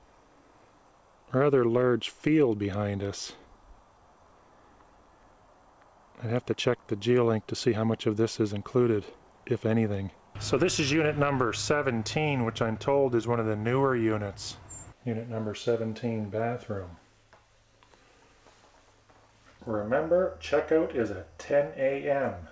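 No technical faults can be heard anywhere in the recording. It has passed through a working call path, and the missing content above 8 kHz fits a wideband codec such as G.722.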